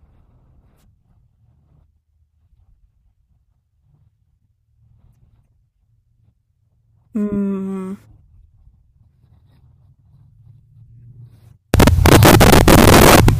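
From 11.74 s to the end, samples are built from the wrong bytes. Low-order bits become dominant, turning the speech into loud, harsh broadband noise.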